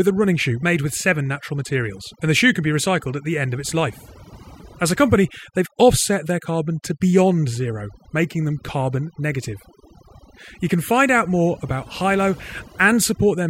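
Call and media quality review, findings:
Overdone noise removal, whole clip. Background gated to near silence, with twinkly musical-noise specks where the noise used to be. Quiet syllable tails getting eaten. Probable component: the noise suppressor, set far too aggressive. It's pulling individual frequency bands down hard whenever they sit close to its noise estimate, and the low-level speech detail goes with them.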